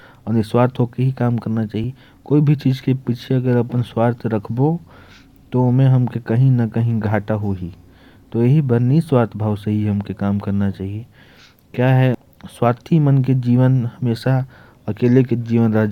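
Damaged data in the compressed stream makes the decoder misread a frame, lose sync and hunt for the next header. In this speech it sounds like a brief chirp, squawk, click or short hole at 1.84 s, between "काम करना" and "कोई भी चीज के", and again at 12.14 s.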